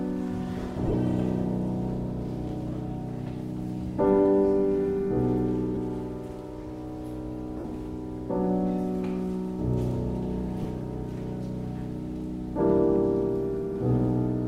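Around 0.86 to 0.94 s there are lost LE Audio frames: about 52.5 ms of dropouts scattered across 75 ms, with the longest run roughly 20 ms. More follow at 5.75 s (15 ms), 7.60 to 7.64 s (45 ms) and 10.63 to 10.65 s (22.5 ms). The lost lengths are multiples of 7.5 ms, which fits dropped LC3 frames. In each gap the decoder patches the hole by replaying the last spectrum with scrambled signs, so tonal content turns into a brief noisy smear. The light lossy compression underneath stays in the background.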